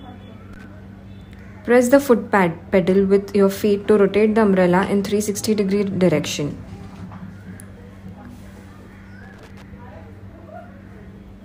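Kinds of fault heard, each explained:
Loose connector crackle: a worn or dirty contact in the signal path intermittently loses and regains connection as it shifts, chopping the audio into an irregular scratchy burst, briefly from 0.53 to 0.64 s and for longer from 9.23 to 9.62 s.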